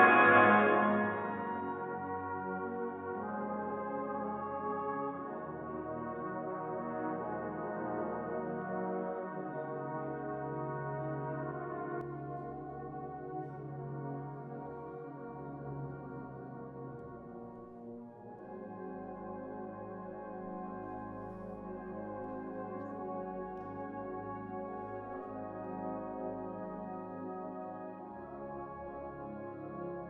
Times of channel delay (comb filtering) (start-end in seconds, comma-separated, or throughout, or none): none